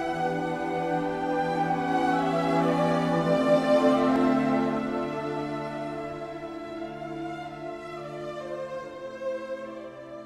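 No technical faults can be heard anywhere in the recording. The sound runs continuously without any audible disturbance.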